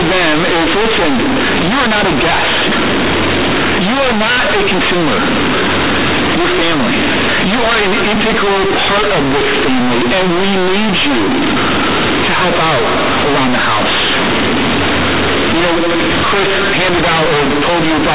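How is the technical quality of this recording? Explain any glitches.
The technical quality is poor. A single fault runs through the whole recording.

From start to finish, the speech comes through as very loud, buzzy distortion, and strong noise fills the pauses where there should be quiet. This is companded audio read as linear. The underlying telephone-coded signal, A-law G.711 at 8,000 samples a second with nothing above 4 kHz, was stored as logarithmic A-law bytes but played back as plain linear 8-bit samples, with no expansion step. Because of that misreading, every change of sign in the waveform swings the output across roughly half its range. Quiet passages therefore come out as large as loud ones, and the waveform is bent out of shape.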